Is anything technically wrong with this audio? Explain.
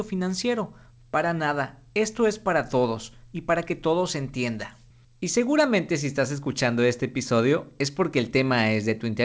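No, nothing in this speech clip is technically wrong. It has passed through a call codec, and nothing is heard above 8 kHz, which fits a wideband codec such as G.722.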